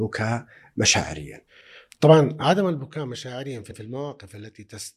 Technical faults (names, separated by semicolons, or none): overlapping chunks; zipper noise